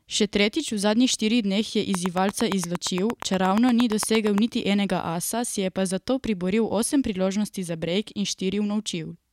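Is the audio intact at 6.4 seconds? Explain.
Yes, the speech at 6.4 seconds plays through cleanly, with no dropout, click, distortion or other fault at that point.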